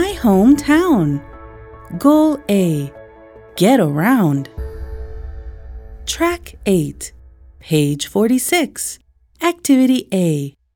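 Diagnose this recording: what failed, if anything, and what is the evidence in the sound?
Nothing failed, and there is no evidence in the sound of any fault.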